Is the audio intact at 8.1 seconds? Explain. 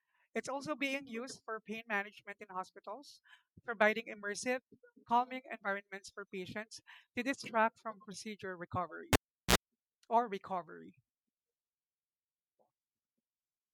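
Yes, at 8.1 seconds the speech is intact, with no dropout, click, distortion or other fault audible at that point.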